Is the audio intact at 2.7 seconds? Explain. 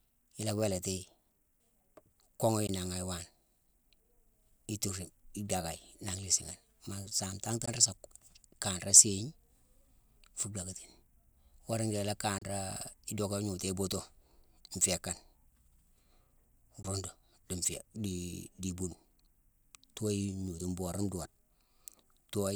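No. From 2.67 to 2.69 s, the speech cuts out in a brief Bluetooth dropout. About 14.5 ms of audio is missing, which fits a single lost packet. That packet likely reached the headphones too late, so playback skipped ahead.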